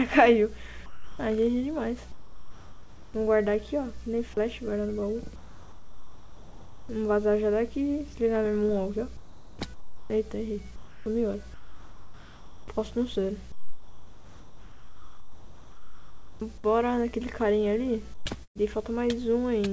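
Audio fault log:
0.86–1.19 s, 2.12–3.14 s, 5.36–6.89 s, 9.17–9.59 s: sound dropped by the voice detector. Each time the sound cuts out and steady noise fills the gap. The gaps replace 330 ms, 1020 ms, 1530 ms and 420 ms, taking away 220 ms, 480 ms, 810 ms and 330 ms of real sound. The sender's detector likely judged quiet sound to be background and stopped sending.
9.17–10.10 s and 13.52–16.40 s: comfort noise in place of the background. The real background gives way to a flat, featureless hiss, 780 ms and then 2.88 s long. In the second stretch the background sits about 19 dB below the loud parts and drops by about 5 dB. This likely comes from discontinuous transmission, where the receiver makes up noise during pauses.
10.76–12.68 s and 18.14–18.58 s: sound chopped by the voice detector. Sending switches on and off repeatedly, so the sound turns choppy. In total, 1440 ms and 234 ms are filled. 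The likely cause is a detector toggling at the edges of quiet sound.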